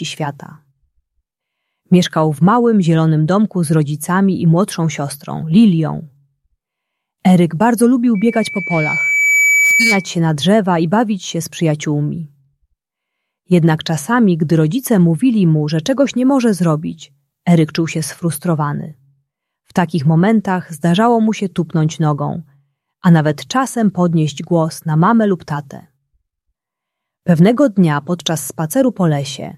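Loudspeaker feedback squeal runs from 8.15 to 10.12 s. A single tone near 2.3 kHz appears and swells over roughly a second and a half until it sits at about the same level as the rest of the sound. The microphone was picking up the loudspeaker it was feeding, and at that frequency the loop's gain rose above one. Each pass round the loop made the tone louder, so it grew into a sustained squeal until it stopped just after 10 s.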